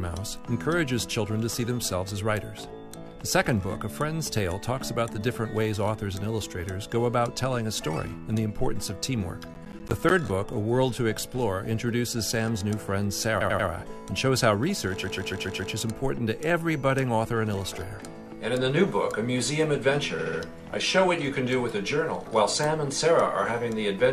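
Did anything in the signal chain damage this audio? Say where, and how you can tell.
Yes. Processor overload crackle from 9.54 to 10.11 s points to the driver or buffer stage. About ten buffers of roughly 10 ms each missed their deadlines and came out as hard-edged gaps of silence. The result is a gritty crackle that stops once the load clears.

Repeated frames point to the codec or storage stage. A 92.9 ms block replays three extra times at 13.40 to 13.68 s. A 139.3 ms block repeats five times at 15.03 to 15.72 s, and a 69.7 ms block three times at 20.18 to 20.39 s. Each is a stutter, adding 278.6, 696.6 and 209.0 ms.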